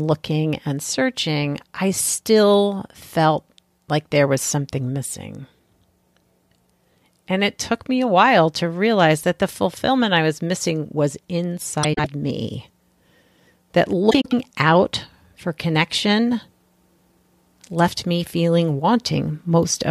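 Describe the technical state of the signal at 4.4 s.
At 4.4 s the speech signal is intact, with no audible technical fault at that moment.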